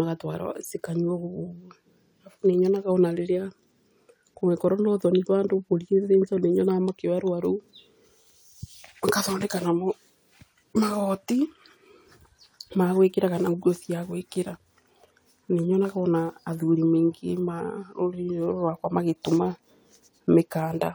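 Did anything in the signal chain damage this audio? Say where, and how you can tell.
No, nothing in the signal chain stood out as damaging this speech on listening.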